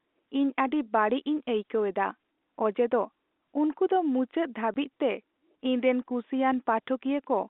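At 4.74 to 4.76 s the speech drops out for 20 ms. This is packet loss filled with silence. One packet's worth of audio never arrived, so the receiver played nothing. The hole has hard edges, set within the narrow telephone band.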